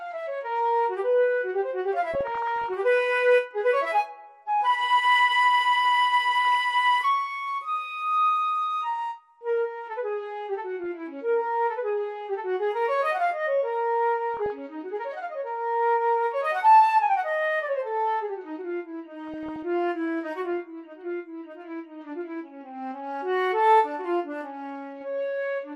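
Throughout, the sound is dull, with granular, gurgling distortion and flickering upper bands, likely MP2 compression at a rate consistent with about 80 kbps. DAB burbling appears at 2.14–2.74 s, 6.55 s, 10.84 s, 14.34–14.59 s and 19.27–19.63 s. Low-level bit errors corrupt sub-band data, producing short blips of noise in single sub-bands.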